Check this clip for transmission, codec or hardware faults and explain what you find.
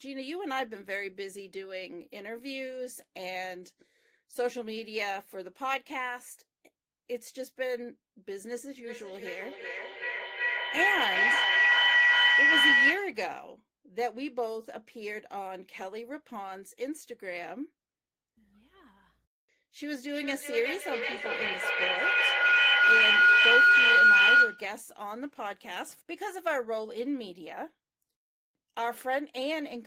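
Two bursts of feedback howl, 8.83 to 13.24 s and 19.86 to 24.79 s: a mic-to-speaker loop gaining each pass, ringing near 2 kHz then 1.5 kHz, pulsing roughly every 0.4 s, peaking about 10 and 13 dB above the speech.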